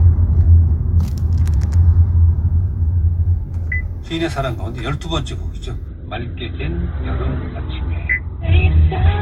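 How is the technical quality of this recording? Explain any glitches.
The recording has one fault, a drop to a lower bitrate in the adaptive stream. From 5.88 s to the end at 9.22 s, the connection slowed and the player switched to a leaner stream, which sounds like a very low-rate Opus version. Nothing above about 4.2 kHz survives, so the treble abruptly vanishes and codec artefacts thicken, without any gap at the switch.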